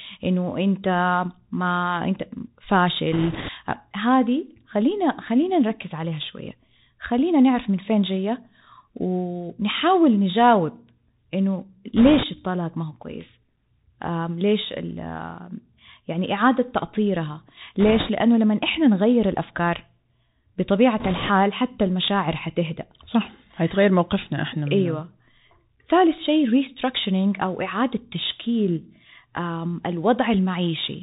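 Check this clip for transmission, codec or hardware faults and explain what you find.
Two faults are present: the speech has passed through a Bluetooth CVSD headset codec, and four short bursts of bit errors on that Bluetooth voice link occur partway through.

The Bluetooth CVSD headset codec affects the whole clip. Nothing above 4 kHz survives, s sounds are scratchy, and a granular hiss sits under the speech. This fits one-bit delta coding at 64 kbps, whose adaptive step lags behind fast, loud high content. Unlike ordinary narrowband telephone coding, it leaves slope-overload grit on sibilants rather than a clean band limit.

The bit errors on the Bluetooth voice link occur at 3.12–3.50 s, 11.97–12.23 s, 17.80–18.10 s and 21.00–21.30 s, with roughly 4 to 5 percent of bits flipped. Each appears as a rushing, crackly wash. In CVSD every bit carries the same small weight and each error fades away, so these bursts produce no sharp clicks, unlike packet loss or PCM bit errors.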